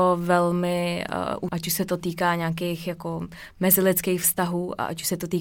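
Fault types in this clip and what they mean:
Damaged data in a compressed stream: a short stretch of the encoded speech arrived corrupted, so the decoder could not read those frames correctly, lost its place in the stream and had to hunt for the next valid frame header before resuming. In this clip that shows up as a brief glitch from about 1.49 to 1.52 s, roughly 30 ms long, where the speech is briefly broken.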